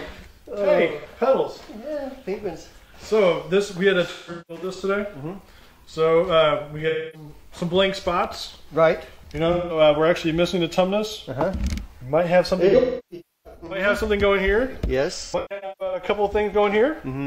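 AAC frame loss with concealment occurs at 0.99–1.06, 4.10–4.82, 6.88–7.29, 9.52–9.80, 12.68–13.86 and 15.24–16.03 s. The decoder rebuilds each missing stretch from the last good spectrum, leaving smeared, noisy or phasey patches. The 12.68 s event is the longest, with runs of up to about 300 ms.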